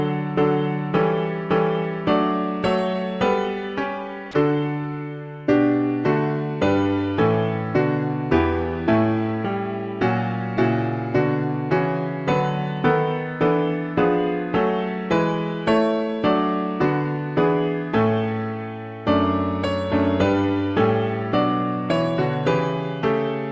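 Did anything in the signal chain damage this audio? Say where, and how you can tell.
Yes. From 4.31 to 4.33 s, 20 ms of sound gives way to steady comfort noise, likely sound dropped by the voice detector at the call-processing stage, with the sender muting a passage it judged background. A spectrogram would show a brief flat noise band interrupting the signal.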